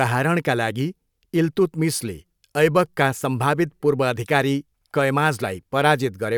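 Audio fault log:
Nothing stood out on listening to this speech recording.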